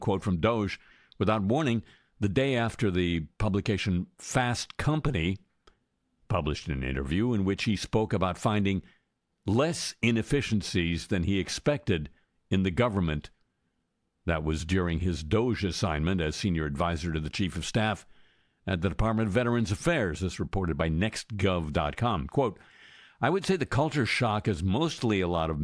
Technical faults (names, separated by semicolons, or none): none